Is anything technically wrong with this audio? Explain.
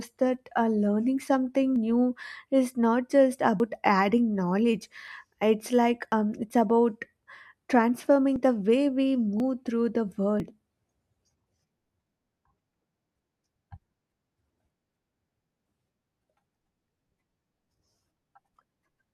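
Yes. Small jumps ahead in the speech at 1.76, 3.6, 5.08, 6.12, 8.36, 9.4, 10.4 and 18.56 s, likely dropped buffers (overruns): unread audio was overwritten, roughly 40 ms each, nearer 100 ms between "new is not just" and "adding knowledge", and about 70 ms at 18.56 s. Waveforms show abrupt discontinuities; spectrograms show thin vertical broadband lines.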